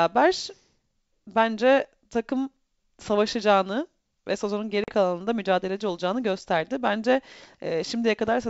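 At 4.84 to 4.92 s, after "takım savaşacağını ve sezonun", a hard silent hole opens, then the speech returns slightly distorted: packet loss on an ADPCM call, a couple of lost packets (40 ms) desynchronising the decoder's predictor.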